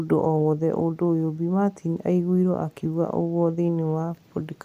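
Nothing in this recording stands out as a technical fault, so there's nothing to point to anywhere along it.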